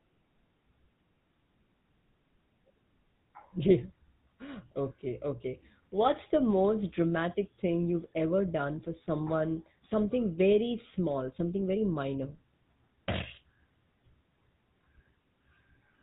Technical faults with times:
0.00-16.03 GSM full-rate codec

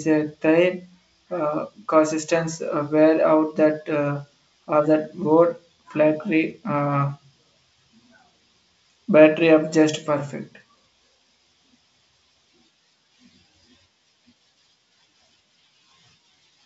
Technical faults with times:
none

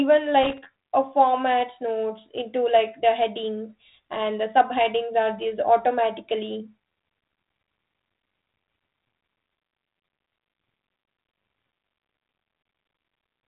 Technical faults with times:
0.43-0.58 loose connector crackle

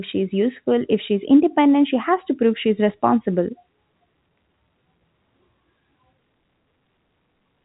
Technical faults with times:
none

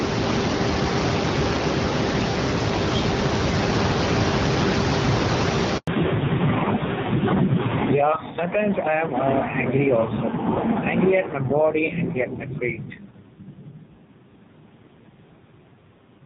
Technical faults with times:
0.00-16.25 gain pumping
5.77-5.87 handover gap
5.87-16.25 fallback to narrowband

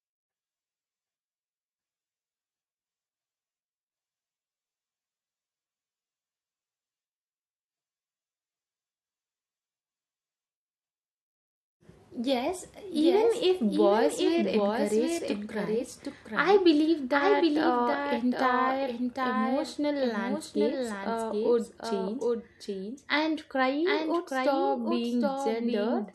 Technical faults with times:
0.00-26.14 doubled audio track

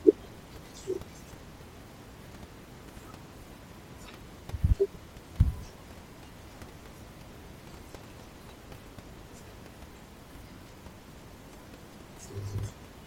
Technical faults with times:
none

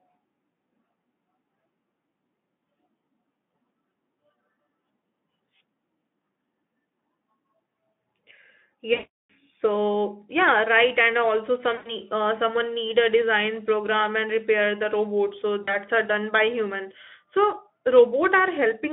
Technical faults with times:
8.93-9.33 VoIP packet loss concealed by the speech codec
11.75-11.92 VoIP packet loss concealed by the speech codec
15.63-15.76 VoIP packet loss concealed by the speech codec

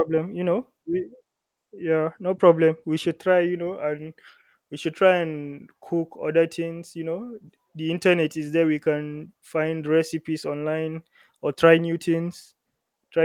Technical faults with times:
none

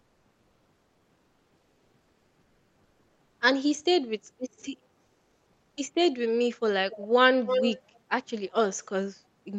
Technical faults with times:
0.00-3.37 comfort noise in place of the background
5.05-5.77 comfort noise in place of the background
6.91-7.07 echo leak
7.46-7.80 echo leak

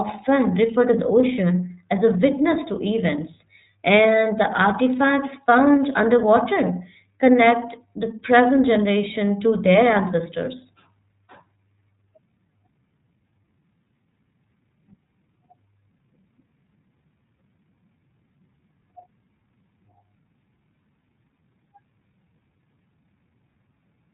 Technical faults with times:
0.00-24.13 iLBC codec

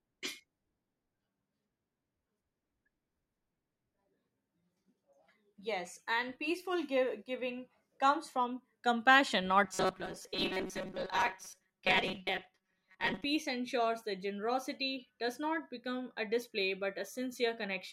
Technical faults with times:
9.64-13.25 robotic sound from repeated short buffers

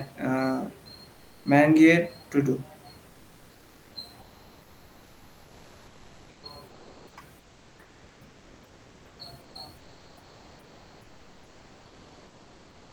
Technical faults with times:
1.11-1.45 comfort noise in place of the background
3.09-3.95 comfort noise in place of the background
4.21-12.92 comfort noise in place of the background

